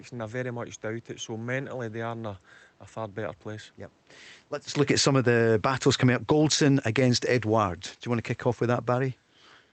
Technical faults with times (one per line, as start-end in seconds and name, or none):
4.68-5.30 automatic gain falling
5.92-9.28 automatic gain falling